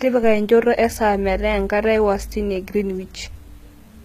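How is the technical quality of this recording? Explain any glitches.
The treble of the speech sounds gritty and synthetic from start to finish, with s sounds coming out metallic and lispy. Above the lower band the brightness is present but doesn't belong to the voice, and nothing remains above 14.9 kHz. The likely cause is HE-AAC compression at a low bitrate, roughly consistent with about 20 kbps. The codec kept only the lower spectrum and rebuilt the upper range by spectral band replication, copying lower bands upward under a coarse envelope. The regenerated harmonics don't align with the real ones, which produces that plainly audible metallic sheen.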